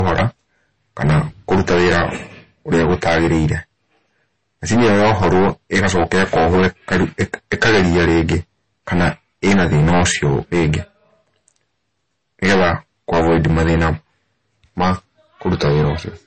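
From start to finish the speech suffers hard clipping: the signal drives about 23 dB past what the chain can pass, so roughly a tenth of the samples are sheared flat. That yields a constant harsh fuzz on every loud syllable, not the brief crackle of light overload, and unlike soft saturation the flat tops spray harmonics high up the spectrum.

Throughout, the audio also stops dead near 8.3 kHz and carries smeared, swirly coding artefacts, pointing to a very low MP3 bitrate. The file, however, behaves like a high-bitrate one, so this is likely low-bitrate audio saved at a high bitrate: re-encoding preserved the first encoder's damage without restoring any detail.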